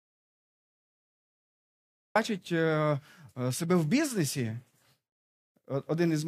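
From the first instant until 2.16 s the recording holds nothing but silence, an audio dropout to silence already in progress when the clip begins. There is no room tone or hiss in that stretch, and the speech then starts abruptly, as though cut in mid-flow. The likely cause is the input signal being lost, through a disconnected device, a failed link or a mute, while recording continued to write empty samples.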